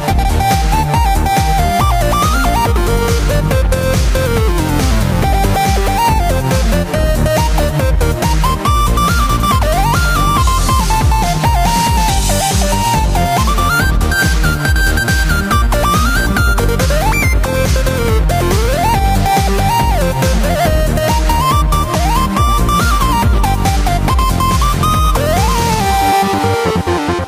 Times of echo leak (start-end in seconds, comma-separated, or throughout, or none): none